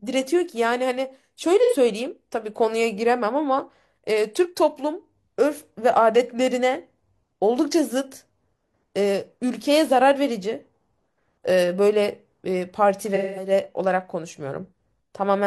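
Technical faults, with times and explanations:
1.63–1.74 s and 13.15–13.51 s, AAC frame loss with concealment: the speech briefly turns smeared and noisy where the decoder lost compressed frames and rebuilt them from the last good spectrum with randomised detail. The first gap covers about 85 ms, which fits two lost frames. The second covers about 213 ms, which fits five, so the concealment runs longer before normal decoding resumes.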